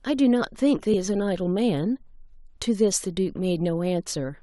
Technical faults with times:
0.93 damaged data in a compressed stream
2.95 damaged data in a compressed stream

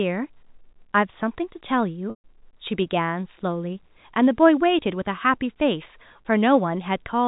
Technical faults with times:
2.10-2.24 packet loss with pitch repetition

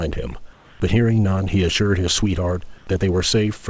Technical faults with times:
0.53-0.80 comfort noise in place of the background

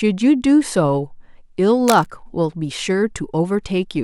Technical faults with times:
1.87-2.09 cable scratch noise

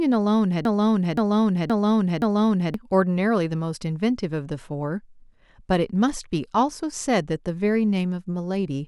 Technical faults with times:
0.65-2.74 broken-record loop

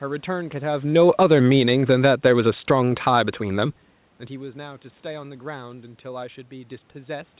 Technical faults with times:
0.73-3.79 automatic gain falling

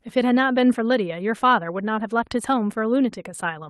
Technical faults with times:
none

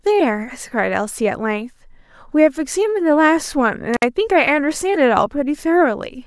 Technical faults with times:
3.94-4.03 intermittent contact

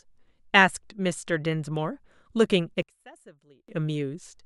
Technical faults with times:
2.83-3.68 one channel inverted

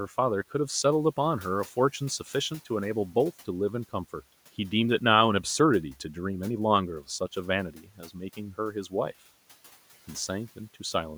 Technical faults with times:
7.74-8.15 speech cut by the noise suppressor

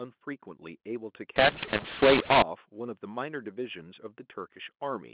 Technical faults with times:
1.36-2.42 mu-law and A-law mixed up

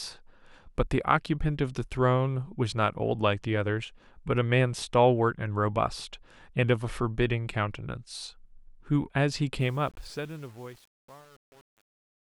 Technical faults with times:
9.60-12.40 truncation distortion on a fade

